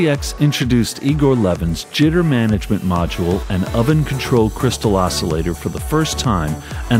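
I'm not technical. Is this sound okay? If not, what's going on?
No. A resampler restarted on every block runs through the whole clip. The sound is converted in separate 40 ms chunks, so each chunk edge gets a small error. That gives a tick 25 times a second, heard as a buzz whenever sound plays.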